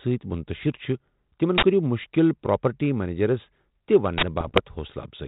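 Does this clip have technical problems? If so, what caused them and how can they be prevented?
Yes. Two uninitialised buffer bursts, at 1.58 to 1.63 s and 4.18 to 4.23 s: each 46 ms block, fitting a 2048-sample buffer, played leftover memory as loud digital noise. Zero buffers before handing them to playback.

Bit errors on an ADPCM link hit 4.40 to 4.61 s, with an error rate of about half a percent. Each flipped bit throws off the decoder's step size and prediction, giving rough pops and level jumps. Add error protection or concealment on the link.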